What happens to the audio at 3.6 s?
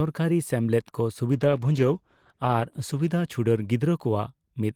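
At 3.6 s you're near the tail end of a call bitrate drop that runs from 1.33 s to 3.89 s. The connection's bandwidth estimate fell, so the encoder was squeezed onto far fewer bits, and the sound fits a drop from around 32 kbps to roughly 13 kbps, sitting at its lowest for about 1.5 s. With that little budget the coding gets coarse and the top end is trimmed, so the speech sounds rough, watery or muffled here until the rate recovers just before 3.9 s.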